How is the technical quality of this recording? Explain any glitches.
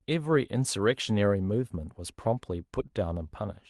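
One glitch stands out in this speech, which comes through a call codec whose top end stops around 12 kHz, consistent with Opus at a moderate bitrate. From 2.87 to 2.91 s there is a short concealed packet loss: roughly 20 ms of audio arrived too late, and the receiver papered over it by extending the preceding sound for about 17 ms before blending back into the real signal. It comes across as a quick smear or wobble in the speech.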